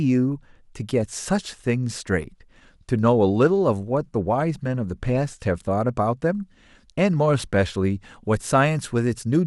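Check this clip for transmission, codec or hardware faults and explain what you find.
One fault is present: DAB burbling in this speech clip, from 1.13 s to 1.20 s. A small burst of bit errors, at a low overall error rate, got past error correction into the MP2 audio, which fits a couple of corrupted frames. Bad scale factors make individual sub-bands leap in level and bad samples add short noise blips in single sub-bands, producing a few watery blips. Unlike a dropout, the audio never goes silent, and the disturbance is noisy and band-limited rather than a broadband click.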